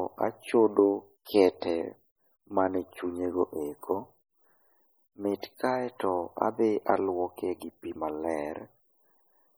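From start to finish the speech carries heavy codec damage, most likely from MP3 compression at a low bitrate, which fits roughly 32 kbps. With so few bits, the encoder zeroes weak frequency lines that then flicker on and off between frames, giving a watery, swirling texture, metallic chirps on s sounds, and smeared consonant attacks. Content extends to about 21 kHz, so the damage shows up as this swirl rather than as a dull top end.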